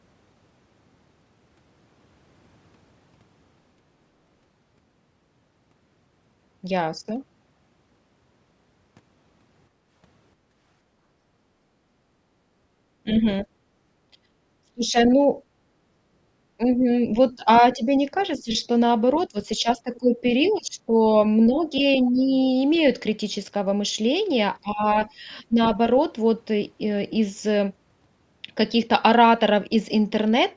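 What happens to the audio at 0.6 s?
Nothing goes wrong at 0.6 s: the speech passes through intact, carrying only the ordinary character of call microphone processing, with its lowest bass trimmed and nothing above 8 kHz.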